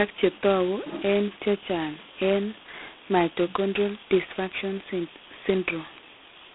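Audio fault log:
Throughout: G.726 ADPCM at 16 kbit/s, the lowest rate, leaves only 2 bits a sample to code the difference from an adaptive prediction, so coarse quantisation gives the speech a harsh, rasping hiss that rises and falls with its level. The band is telephone-narrow, about 250 Hz to 3.4 kHz, with nothing above 3.8 kHz. A spectrogram shows a hard ceiling near 3.8 kHz and a grainy noise floor filling the gaps between harmonics wherever speech is loud.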